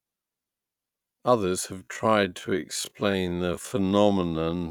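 A speech clip with a time-stretched section running from 1.71 s to the end. At that point the pace drops abruptly to about half speed (0.518x) while the pitch stays where it was. The slowed portion drags. The likely cause is stretching software lengthening that part of the audio by repeating short pieces of it to fill time without lowering the pitch.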